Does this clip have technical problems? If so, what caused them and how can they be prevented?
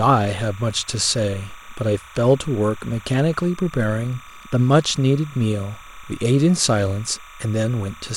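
Yes. Timecode bleed runs through the whole clip. A chirping warble sits behind the speech, about 25 dB down. It flips between roughly 1 and 2 kHz. That matches 30-frame timecode leaking from a nearby track or cable. Route and shield timecode separately from audio lines.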